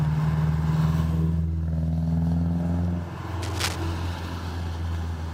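A worn cable or connector likely shifted from 3.41 to 3.77 s, producing cable scratch noise: dense, uneven crackling bursts only slightly quieter than the sound itself.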